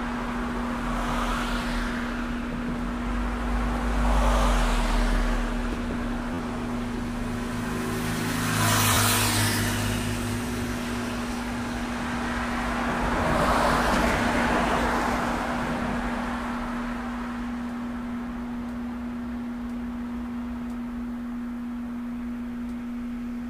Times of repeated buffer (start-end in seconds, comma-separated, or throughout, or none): 6.34-6.39, 8.94-8.96